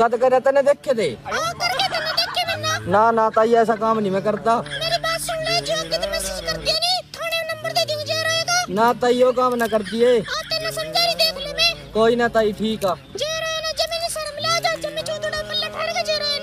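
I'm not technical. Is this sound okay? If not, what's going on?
Yes, it's fine; I don't hear any problems.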